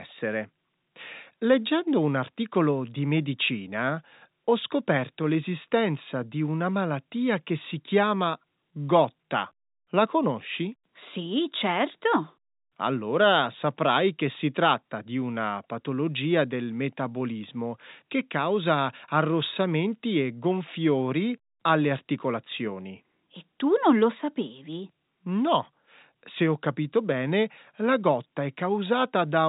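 No technical faults can be heard anywhere in this speech recording. It comes through G.711 telephone coding, with the band stopping at about 3.8 kHz and only faint coding noise riding under the level.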